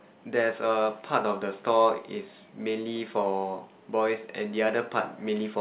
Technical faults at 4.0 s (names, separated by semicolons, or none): none